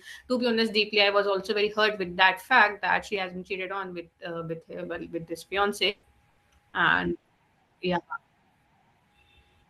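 At 3.16 s, right after "that fact that she", there is a sudden gain jump. The level drops by about 5 dB from one sample to the next. The speech and the background noise fall together, with no fade. The likely cause is a gain setting applied without a ramp. The quieter stretch lasts until 4.83 s, just before "well with this", where the level jumps back up just as abruptly.

From 5.89 to 7.77 s, after "well with this", there is repeated packet loss with a robotic sound. Audio goes missing again and again, in about nine separate holes. The longest hole is 140 ms. Each gap is filled by stretching the sound that came just before it. About 440 ms is patched this way, roughly a quarter of the stretch. The speech sounds choppy, with pieces missing.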